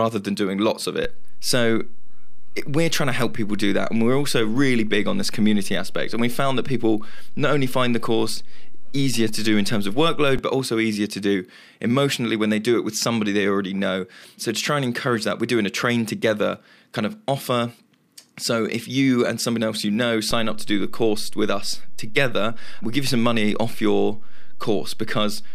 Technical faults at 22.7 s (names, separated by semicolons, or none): DC step